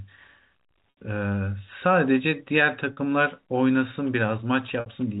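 Packet loss with pitch repetition occurs at 0.90 to 0.97 s, 2.93 to 2.97 s and 4.80 to 4.86 s. Each time, lost packets were bridged by repeating the last pitch period, covering gaps of 70, 40 and 60 ms; the 40 ms gap gives a briefly held, buzzy tone, while the longer two fade into silence before the speech returns.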